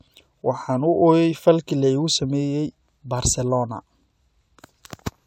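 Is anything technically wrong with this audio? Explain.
No, nothing technically wrong can be heard in this speech recording; the signal stays steady and intact throughout.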